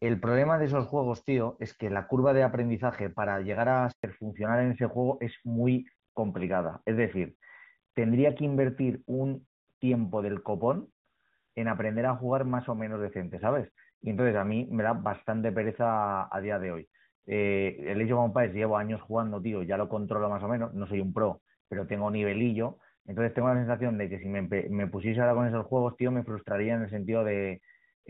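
At 3.92 s a handover gap cuts the speech out for 120 ms, until 4.04 s. While the call switched networks no speech frames arrived, so the sound fades within a few tens of milliseconds and stays silent until the new link delivers audio again. Whatever was said in that span is gone.

From 4.04 s to the end there is a fallback to narrowband. Before the switch, HD Voice carries the band up to about 7 kHz with only light coding roughness. Afterwards nothing remains above 4 kHz, which fits a step down from AMR-WB to an AMR-NB codec. The speech turns duller and rougher and loses its sibilant detail.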